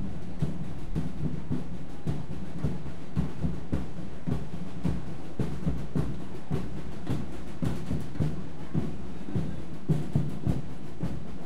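From start to finish the waveform sits off zero with a DC offset of about -27 dBFS. It is inaudible, yet it eats headroom and shows as a steady band at 0 Hz on the spectrogram.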